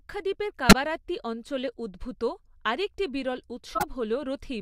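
Corrupt frames decoded at 0.69–0.73 s, before "অঞ্চলে উদ্ভূত আরেকটি বিরল", and 3.75–3.84 s, after it. Flipped bits misplace energy across a few frames, producing brief glitch bursts.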